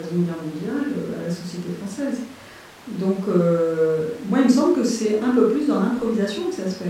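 No technical faults are audible anywhere in the speech.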